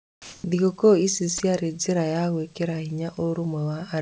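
From the start to 0.44 s, the background sounds like comfort noise in place of the real room sound. It is a smooth, even hiss with no detail. Its level sits about 3 dB away from the background that follows. The background is quiet, about 36 dB below the loudest speech. The likely cause is discontinuous transmission. The sender went silent while it heard no speech, and the receiver filled the gap with synthetic noise.

From 1.38 s to 1.40 s, just before "njĩra ya gwĩkĩra", a 20 ms slice of sound is dropped by the voice detector. The speech gives way to flat noise for that instant, then returns. The likely cause is a sender detector that took this quiet stretch for background and briefly stopped sending. Comfort noise covered the gap. Throughout, nothing is heard above 8 kHz, which fits a G.722 call codec at 64 kbps.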